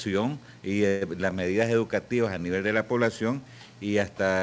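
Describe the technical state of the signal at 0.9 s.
At 0.9 s the signal is inside a call audio freeze running from 0.88 to 1.03 s. The sound stalls and the last moment is stretched into a fading buzz- or hiss-like fill lasting about 132 ms, which points to late packets that likely drained the jitter buffer. When the stream resumes it carries on where it stopped, so nothing is lost, but everything after arrives about 132 ms later. The band stays capped at 8 kHz, consistent with G.722.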